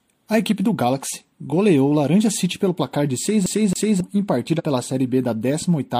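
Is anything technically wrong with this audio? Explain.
Yes, the speech has two technical faults.

From 3.46 to 4.00 s, a 0.27 s slice stutters twice with short mutes: the CD is stuck on one turn, a scratch throwing the laser back a track.

At 4.55 to 4.61 s, the audio jumps ahead roughly 50 ms, as compressed frames are skipped, which fits one dropped frame of about 46 ms.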